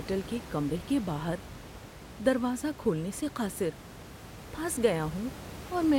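No technical faults are audible.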